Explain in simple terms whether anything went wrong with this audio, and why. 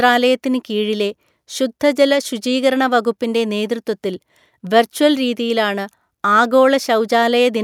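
Nothing went wrong here.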